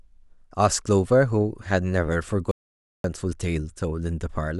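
At 2.51 s the speech cuts to dead silence for 0.53 s, until 3.04 s: an audio dropout to silence, likely from the input briefly disconnecting.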